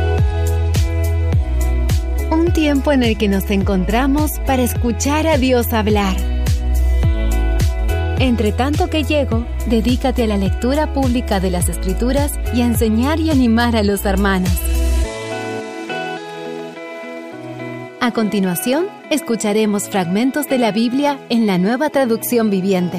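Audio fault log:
Nothing to log here, as no faults turn up anywhere in the clip.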